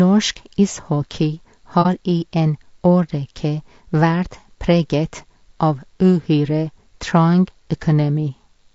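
Throughout the clip the speech sounds rough and grainy, with noise filling the gaps between harmonics and a thin, synthetic top band. This is plainly audible damage from a short-frame codec, likely low-delay AAC compression at a rate that fits around 32 kbps. On a spectrogram the harmonic stripes look smeared, with speckled energy between them.

From 1.82 to 1.87 s there is AAC frame loss with muting. About 30 ms of audio is missing, consistent with a single lost frame whose spectrum the decoder zeroed. Overlapping windows fade the sound out and back in, so it is heard as a brief soft dropout. The waveform shows a tapered gap, and the spectrogram a narrow blank column.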